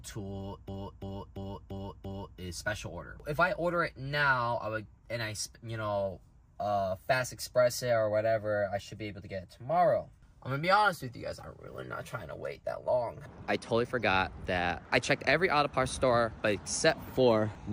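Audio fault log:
0.68–2.39 s system hang loop: one 341 ms piece repeats exactly five times, about 2.93 per second, a stutter fitting a 16384-sample ring buffer. It has identical repeats rather than silent gaps.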